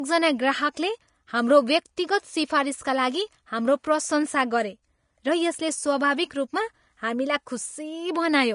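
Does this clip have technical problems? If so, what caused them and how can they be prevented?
Yes. Vorbis compression runs through the whole recording: nothing survives above 10.6 kHz, and the treble that remains sounds hissy and grainy, with roughened tones and blurred attacks. This is likely low-quality Vorbis encoding, around 35 kbps, which cuts the top band and quantises the remaining high-frequency detail so coarsely that it turns into noise. To prevent it, encode at a higher quality setting or keep an uncompressed master.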